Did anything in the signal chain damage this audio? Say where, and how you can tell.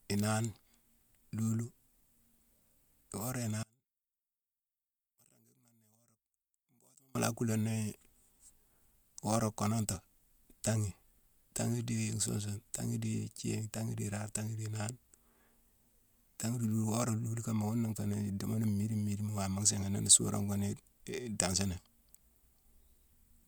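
Yes. From 3.63 to 7.15 s the speech drops by about 34 dB to a faint residue, then returns at full level. That pattern points to one channel inverted, likely a polarity swap in one leg of the analogue wiring ahead of a mono fold-down. With one side flipped, the centred speech common to both channels cancels when they are summed, and only the small difference between left and right is left to hear.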